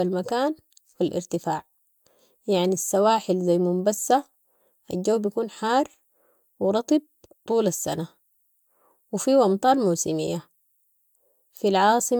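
No technical faults can be heard anywhere in this speech recording. Nothing in the audio calls for a time or a value to be noted.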